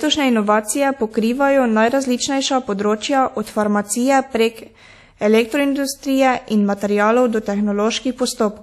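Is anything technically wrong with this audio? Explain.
Yes. There is WMA compression throughout: the speech was likely coded at a low bitrate, about 48 kbps, so quantisation noise smears across tens of milliseconds and weak spectral detail drops out. It sounds ringing and washy, with hiss breathing along with the speech and nothing above 14.5 kHz.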